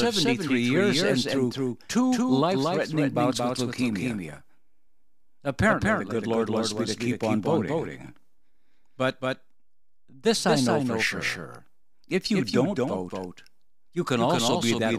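From start to finish the speech carries a doubled audio track: a second, full-band copy trailing about a fifth of a second behind, roughly 5 dB down, with no decay or room colour. It's likely the same signal captured twice through a slower path.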